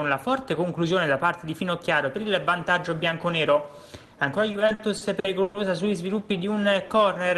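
From 4.51 to 5.57 s come repeated stalls (stutter): the jitter buffer ran dry seven times and the receiver extended the last sound, the longest hold about 120 ms. Unlike dropouts, nothing is lost; the sound just hesitates.

From 6.85 to 7.37 s a jitter buffer slow-down stretches the audio to about 93% speed, adding 41 ms by repeating pitch periods. It is a smooth drag at unchanged pitch rather than abrupt halts.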